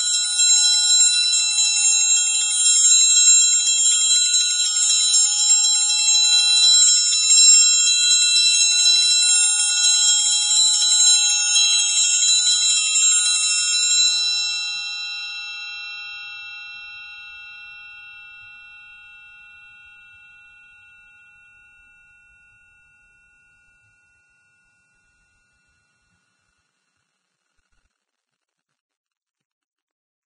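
Vorbis compression damage runs throughout this music, likely from a low-quality encode that fits a bitrate near 18 kbps. Nothing remains above 9.7 kHz, and the surviving treble is quantised so coarsely that detail turns to hiss, leaving tones grainy and attacks smeared.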